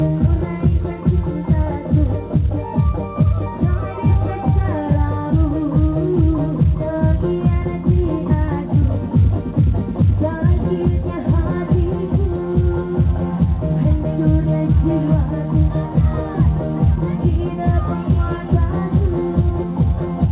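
No technical faults are audible.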